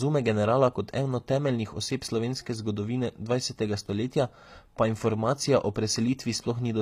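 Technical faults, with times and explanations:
Throughout, HE-AAC compression: the top end sounds bright but not quite real, with s sounds coming out gritty and a bit lispy, and nothing at all above about 15.5 kHz. That's likely spectral band replication at work. The upper band is rebuilt by copying lower bands up under a coarse envelope, so its harmonics don't line up with the real ones below. The damage is plainly audible, which fits a low HE-AAC v2 bitrate of roughly 24 kbps.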